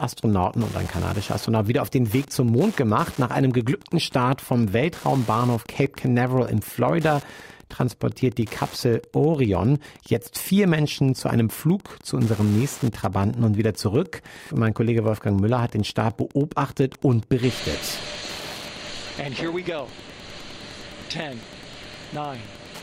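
Wi-Fi interference runs throughout the clip: a steady tick repeats every 102.4 ms, just under ten times a second, sitting roughly 25 dB below the wanted sound. A nearby Wi-Fi radio sends a short beacon at that fixed interval, and the audio circuit picks up the radio energy and rectifies it into the signal path. Each beacon becomes a brief click, so the result is a regular, mechanical ticking under the audio.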